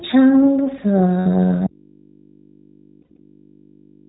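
Speech recorded through an iLBC codec path sounds band-limited below 4 kHz and slightly rough and synthetic throughout, which fits the 15.2 kbps mode with 20 ms frames. Lost iLBC frames at 1.20 to 1.27 s leave a 60 ms stretch filled with a held, faintly buzzy repeat of the last pitch cycle. Clean speech returns right after because each frame decodes independently. A second loss from 3.02 to 3.18 s is scattered, totalling about 100 ms with the longest run near 70 ms, and briefly adds the same synthetic concealment texture. At 1.67 s the speech cuts off abruptly and never returns. Mains hum at about 40 dB below the speech level fills the gap until the clip ends, likely an audio dropout to a faint residue where the signal feed broke but the input stayed live.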